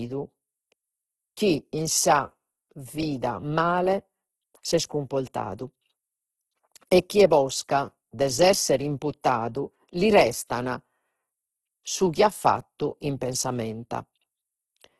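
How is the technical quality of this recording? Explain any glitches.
The quality is poor throughout, because of one lasting fault. Nothing reaches above 12.1 kHz, and the speech sounds rough, grainy and noisy across the whole clip. The likely cause is heavy Opus compression in its music mode, at a bitrate which fits about 12 kbps. Short of bits, the encoder keeps each band's energy but refills the detail with noise or folded copies of lower bands.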